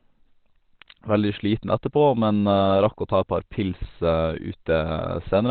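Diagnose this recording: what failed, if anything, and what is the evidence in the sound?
Codec stage: the speech sounds muffled and hoarse throughout, with nothing above 4.5 kHz. This is likely Opus compression in narrowband speech mode, fitting about 16 kbps.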